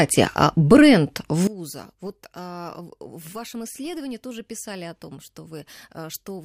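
One channel inverted, from 1.47 s, just after "а бренд", to the end of the clip at 6.45 s: the speech suddenly drops by about 20 dB and becomes a faint copy of itself. The likely cause is reversed polarity on one stereo channel, so the centred material common to both sides cancels when they are summed to mono, leaving only the faint difference between channels.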